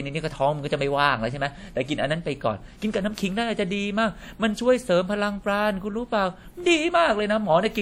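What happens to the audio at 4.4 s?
At 4.4 s the speech carries plainly audible compression damage, as it does throughout. It rings and sounds washy, with hiss that swells and fades with the signal. This is likely WMA compression, consistent with roughly 48 kbps. Long transform blocks smear quantisation noise, and weak detail drops out.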